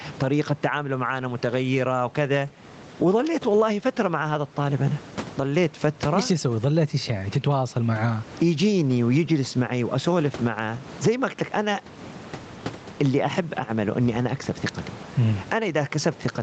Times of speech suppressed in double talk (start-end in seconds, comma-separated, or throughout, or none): none